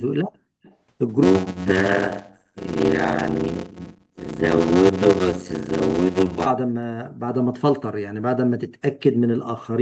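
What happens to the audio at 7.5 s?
Nothing goes wrong at 7.5 s: the speech runs on intact through that moment, with only the 8 kHz top end and coding texture of the call path it travelled through.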